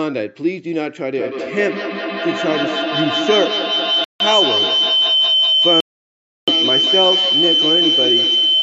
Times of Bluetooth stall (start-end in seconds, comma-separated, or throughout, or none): 4.04-4.21, 5.80-6.49